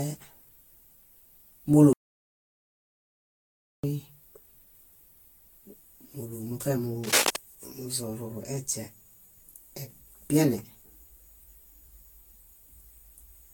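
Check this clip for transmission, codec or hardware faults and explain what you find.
Yes, there are three faults in this speech clip.

The whole thing has generation loss: swirly, hollow and smeared, with nothing above 19.2 kHz. That's likely from around ten passes through Vorbis at about 58 kbit/s.

From 1.93 to 3.84 s there's an audio dropout to silence: about 1.9 s of dead silence with no room tone, likely a lost input.

Right after "múlu muṗe", from 7.04 to 7.36 s, there's cable scratch noise: a rough scratchy burst about 5 dB above the speech, likely from a worn connector.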